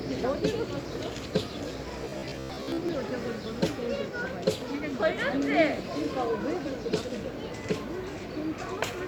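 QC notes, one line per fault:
2.02–2.90 s, robotic sound from repeated short buffers. The audio turns into a rigid, metallic buzz with a fixed pitch of 66.8 Hz, while still loosely tracing the shape of the underlying sound. The likely cause is fresh audio arriving too slowly, so playback loops a short chunk instead. That pitch fits a chunk of about 15 ms. About half of this stretch is repeated material, and the real audio it replaces is lost.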